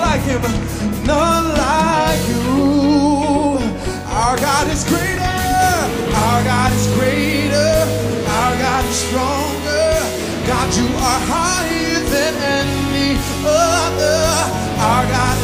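Nothing here stands out as a technical fault, and I can't point to any moment where something went wrong.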